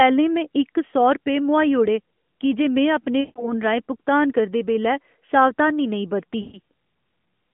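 At 3.20 to 3.53 s, just before "राहें भुगतान करदे बेल्लै", lost AMR speech frames stretch the sound into a fading smear. The decoder repeats its last good settings with falling gain, which fits about 160 ms of missing 20 ms frames. After "बेल्लै सावधानी नेईं बरती", 6.42 to 6.60 s repeats this over a shorter run. The narrowband AMR speech itself stays band-limited to roughly 200 Hz to 3.4 kHz.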